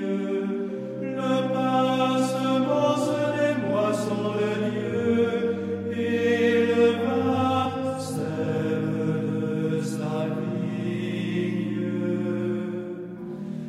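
At 7.64 s the audio jumps forward by about 70 ms, roughly three compressed frames of about 26 ms each. It sounds like compressed frames skipped, with no silent gap.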